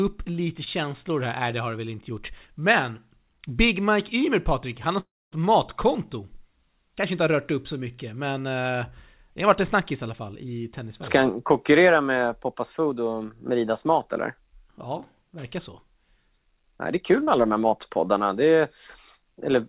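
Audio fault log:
0.64 s and 17.24 to 17.29 s, short concealed packet loss: Two quick blips where a few hundredths of a second never made it to the decoder in time. The first, at 0.64 s, is a tiny smear over a 20 ms hole. The second comes right after "det är kul" and just before "alla de", where about 40 ms went missing and the receiver patched it by stretching the last bit of sound forward, so you get a brief wobble rather than a clean gap.
5.0 to 5.34 s, long network dropout: Right after "han har" the audio just stops arriving for about a third of a second, most likely a network dropout. The receiver keeps the last sound going as a fading buzz, and for roughly the last quarter second there's only silence before the audio comes back, minus the stretch that was lost. All of this rides on the narrowband call codec, which cuts everything above 4 kHz, consistent with G.711 A-law.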